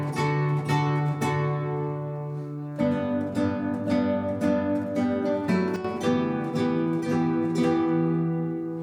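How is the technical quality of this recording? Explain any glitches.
There is one glitch in this recording, a sudden gain jump. At 5.76 s the level drops by about 9 dB in a single step, lasting roughly 85 ms to 5.85 s. The sound and its background noise fall together, which points to a gain change applied without a ramp, likely a setting or bit shift taking effect between consecutive samples.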